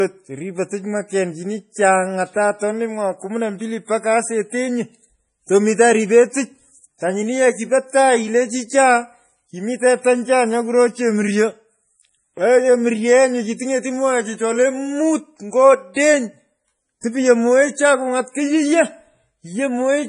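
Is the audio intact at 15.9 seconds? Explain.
No. From 15.94 to 15.96 s a pre-echo sits ahead of an attack: a short hiss smears about 23 ms before the onset, because quantisation noise sized for the loud transient spreads across the whole transform block, softening the attack. Through this moment the sound is also watery and swirly with nothing above 10.5 kHz, the heavy damage pointing to a likely cause of MP3 compression at a very low bitrate, which fits about 32 kbps, where weak frequency lines flicker between frames.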